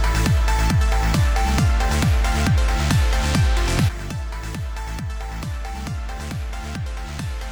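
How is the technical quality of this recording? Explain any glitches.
Nothing in the recording stood out as a technical problem on listening, so there are no glitches to explain.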